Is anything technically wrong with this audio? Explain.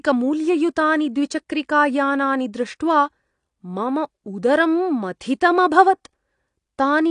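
Yes, the speech carries AAC compression damage throughout: audio above 9.8 kHz is absent and the rest sounds dull and smeared. It's likely a low-bitrate AAC-LC encode, which fits about 32 kbps. A spectrogram shows a hard ceiling at 9.8 kHz.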